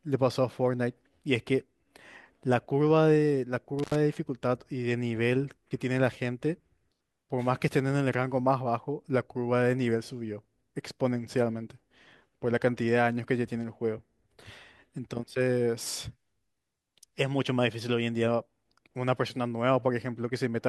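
At 3.79 s to 3.95 s, an intermittent contact briefly opens the line for about 79 ms, dropping the speech with crackle at both edges, unlike a clean digital dropout.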